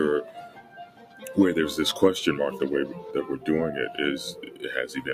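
A speech noise suppressor has been left running on this non-speech sound, swinging its level by roughly 15 dB. Unlike compressor pumping, sharp attacks pass while sustained tones and decaying tails sink. The suppressor cuts the sound hardest from 0.24 to 1.24 s, by about 14 dB, and again from 4.32 to 4.63 s, by about 10 dB. In both stretches steady material sinks in level or has its decay cut short.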